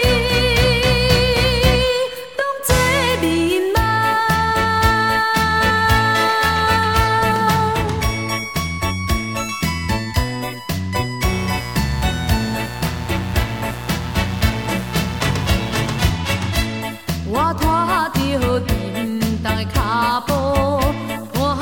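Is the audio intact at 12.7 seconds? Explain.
No, not quite. At 12.7 seconds there's a mains buzz running from 11.21 to 16.09 s. Sharp switching spikes twice per 60 Hz cycle leak in, stacking harmonics up into the kilohertz range. You hear a steady, raspy buzz sitting only about 10 dB under the sound.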